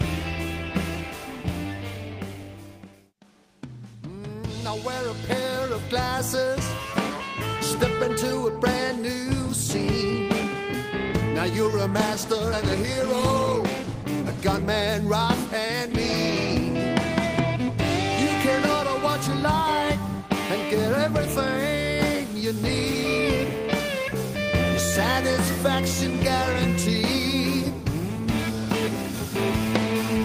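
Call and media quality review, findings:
Call bitrate drop, 11.9 to 14.93 s: audio goes rough and a bit muffled, at its worst for about 2 s. The Opus encoder seems to have dropped from around 32 to about 17 kbps, coding coarser and trimming highs.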